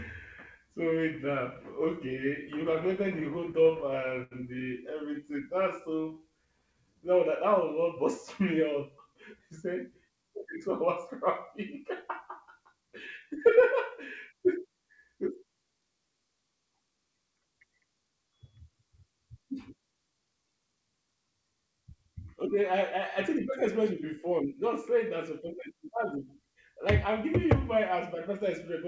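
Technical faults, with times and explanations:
2.76–4.33 s, repeated stalls (stutter): packets kept arriving late, so the jitter buffer ran dry nine times. Each gap was bridged by extending the last sound, 151 ms in all, the longest 79 ms, about 10% of this span. Nothing is lost, but the sound drags and stutters.
5.14–6.96 s, jitter buffer slow-down: with its reserve running low, the receiver repeated single pitch periods and slivers of pauses over and over, adding 141 ms. Playback drops to 93% speed at unchanged pitch, so sounds come out drawn-out and slightly stretched.
9.07–11.85 s and 12.60–14.34 s, jitter buffer speed-up: the buffer held more audio than its target, so the receiver repeatedly cut out short pitch-period pieces, roughly a tenth of a second in the first stretch and somewhat less in the second. Playback runs at 104% with the same pitch.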